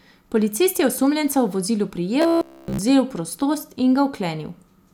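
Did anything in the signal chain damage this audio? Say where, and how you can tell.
Yes. From 2.22 to 2.79 s, just after "je osumljenca v vozilu", the speech turns into robotic sound from repeated short buffers, a rigid metallic buzz at 66.7 Hz. That fits a 15 ms block replayed throughout, likely a driver or buffer underrun.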